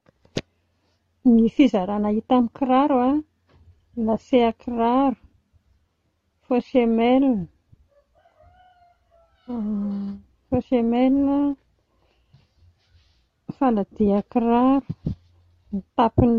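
No technical faults can be heard anywhere in this recording.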